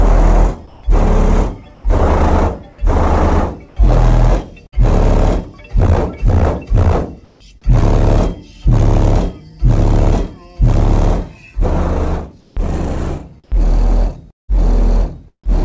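Between 0.67 and 1.84 s, 3.68 and 4.74 s, and 7.24 and 7.40 s, stretches of background (about 260, 140 and 160 ms) turn into steady, featureless hiss. This is comfort noise in place of the background, likely from discontinuous transmission filling pauses with synthetic noise. At 7.24 s it sits about 34 dB below the loud parts with no level step. Unlike a dropout, the hiss is continuous and carries no real detail.

At 4.66 to 4.74 s, a burst of packet loss leaves about 60 ms missing. The receiver stretched the last sound for about 60 ms while fading it, so the sound resumes further on with a skip. A comfort-noise gap gives flat hiss instead of a decaying continuation.

From 12.41 to 15.60 s, sound is chopped by the voice detector, likely switching transmission on and off several times. About 420 ms of edges and quiet parts become synthetic fill. Nothing above 8 kHz remains, which fits G.722 coding.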